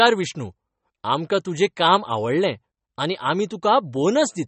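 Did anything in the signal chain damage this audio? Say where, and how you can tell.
Yes. The damage sits at the codec stage and runs through the whole speech clip: it likely passed through MP3 compression at a low bitrate, with plainly audible artefacts. Nothing remains above about 8.3 kHz, a hard ceiling consistent with an encoder short of bits, which fits roughly 32 kbps. With so few bits, weak frequency lines are zeroed and flicker between frames, giving the sound a watery, swirling texture with softened attacks.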